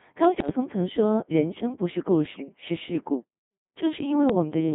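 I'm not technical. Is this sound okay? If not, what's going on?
No. The whole recording has passed through the Codec 2 vocoder, a very low-rate system built for digital radio. It doesn't keep the actual sound wave. It sends a rough description instead: pitch, loudness, and the overall shape of the tone. The receiver then rebuilds the speech from simple tones. That is why it sounds robotic and buzzy all the way through, with heavy damage to natural quality. The sound is also squeezed into a narrow, telephone-like range.

There are also two short patches of bit errors on digital voice radio. The first is from 0.38 to 0.50 seconds. The second is from 4.30 to 4.35 seconds. Some of the transmitted data was flipped by a weak radio signal. Each piece of data controls the pitch, loudness or tone of a short chunk of speech, and each patch fits about two such chunks. So the voice suddenly jumps or warbles there, turning briefly into bleepy, garbled noise.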